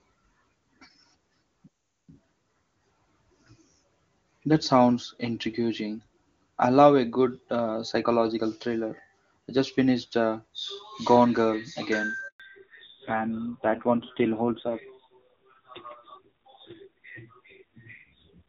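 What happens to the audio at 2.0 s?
A playback stall runs from 1.67 to 2.09 s, so at 2.0 s the speech has dropped to silence for about 0.41 s before resuming. The player was likely starved of data or had its output thread blocked, leaving nothing to play until it recovered.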